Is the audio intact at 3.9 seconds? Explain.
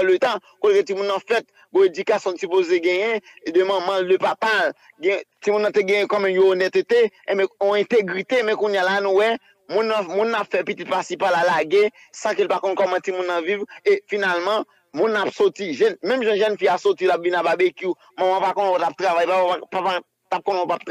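Yes, the audio is intact at 3.9 seconds, with no fault heard at that point.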